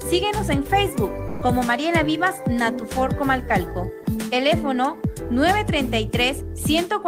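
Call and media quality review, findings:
1.27–1.41 s: sound dropped by the voice detector, 140 ms gone, flat comfort-noise band on spectrogram. Likely DTX misclassifying sound as background, consistent with Opus.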